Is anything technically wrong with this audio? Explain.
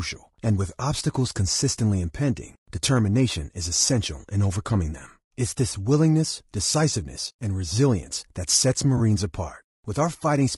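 Yes. Throughout the speech there is plainly audible coding damage: voices sound rough and grainy, with noise filling the gaps between harmonics and a thin, synthetic top band. This is likely low-delay AAC compression (AAC-ELD). Its short frames resolve pitch poorly, and the damage fits a bitrate around 32 kbps.

From 8.97 to 9.0 s, just after "and resilience that sets", there is AAC frame loss with concealment. The decoder rebuilt the gap from the last good spectrum, leaving a brief smeared, phasey patch that fits one lost frame of about 20 ms. It is not a click or dropout, because there is no silence or hard edge.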